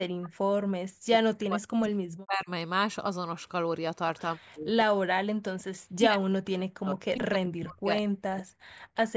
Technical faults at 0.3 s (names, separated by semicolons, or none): speech suppressed in double talk